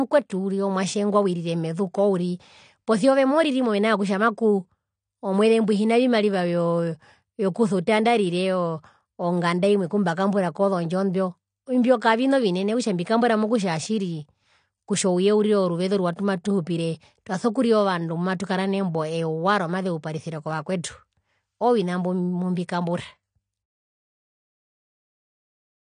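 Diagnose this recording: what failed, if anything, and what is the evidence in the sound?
The codec stage failed across the whole clip: the speech has nothing above 9.8 kHz and a plainly audible dull, smeared quality with a warbling, fizzy texture on sustained sounds and sibilants. That points to likely AAC compression, with the coder starving high bands and approximating what remains at a bitrate that fits around 32 kbps. A simple low-pass filter or band-limited line would cut the top cleanly without the swirling artefacts in the remaining band.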